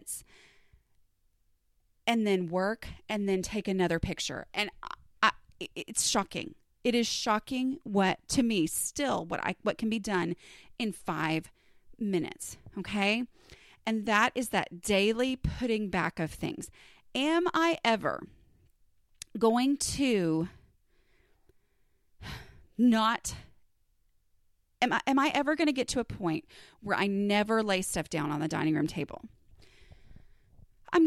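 No technical faults can be heard anywhere in the recording.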